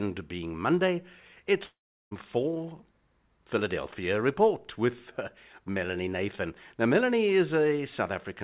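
From 1.64 to 2.13 s the sound smears into a fading buzz that drops to near silence before resuming further on, likely a long network dropout in which the receiver stretched the last audio and then lost its thread. The band stops at 4 kHz throughout, as expected of a G.711 A-law call path.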